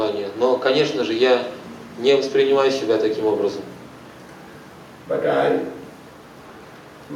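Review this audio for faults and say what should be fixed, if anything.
No faults found in this audio, so nothing needs fixing.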